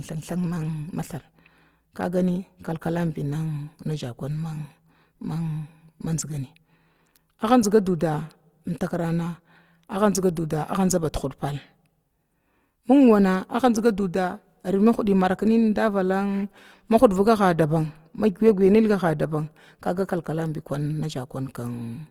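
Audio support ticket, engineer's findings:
Opus compression, throughout the clip. Rough, grainy speech, plainly audible. Likely Opus CELT mode at a rate that fits 24 kbps: band energies kept, starved bands filled by folding or noise. Bandwidth not narrowed; content extends to 20.2 kHz.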